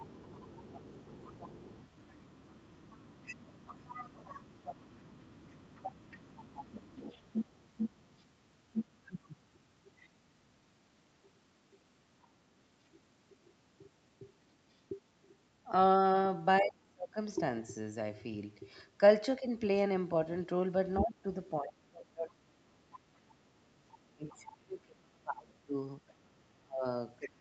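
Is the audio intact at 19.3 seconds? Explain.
Yes, at 19.3 s the speech is intact, with only the normal band limit of the call path, which leaves nothing above about 8 kHz.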